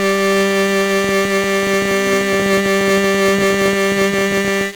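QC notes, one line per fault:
Throughout: 1-bit DFPWM compression. One bit per sample nudges an adaptive level up or down, burying the music's treble in fuzzy, crackly broadband hiss. The heavy damage fits a rate near 48 kbps.
1.04–4.62 s: train of clicks. Around fifty similar clicks at an uneven 13.2 per second stand a few dB above the music, likely from interference or a faulty connection.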